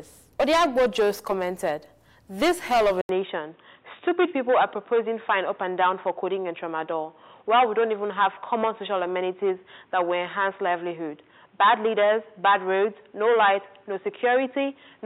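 At 3.01 s an 80 ms silence is followed by dull, boxy sound with nothing above 3.8 kHz and a faint new noise floor, likely the input switched to a poorer device.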